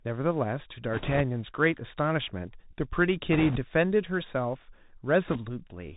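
The speech has gone through a Bluetooth CVSD headset codec, which sends one bit per sample saying only up or down, with an adapting step. The sound is cut off above 4 kHz, s sounds turn scratchy, and a granular hiss lies under everything, plainly audible throughout and fitting a 64 kbps headset link. Bit errors on the Bluetooth voice link, at an error rate of a few percent, flip bits in short bursts from 0.93 to 1.21 s, 3.33 to 3.58 s and 5.28 to 5.39 s. Because each bit carries little weight and errors fade quickly, these bursts sound like rushing crackle rather than sharp clicks.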